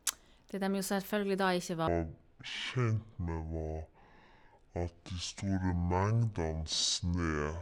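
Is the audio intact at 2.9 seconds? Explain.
No. At 2.9 seconds the speech sits inside a section at the wrong speed that runs from 1.88 s to the end of the clip. It plays at about 0.54 times its original rate, likely from being fitted to the wrong clock, so speed and pitch fall together, about ten semitones down, making it sound deep and dragged. On a spectrogram the harmonics and formant bands crowd lower and each syllable stretches wider; the waveform shows slower, elongated cycles.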